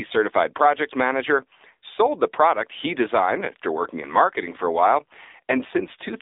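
Speech runs through the AMR narrowband mobile codec for the whole clip. The band sits at 250 Hz to 3.7 kHz with nothing above, and a plainly audible buzzy, synthetic quality points to a low mode around 7.4 kbps. That buzz is what separates it from a clean telephone band-limit.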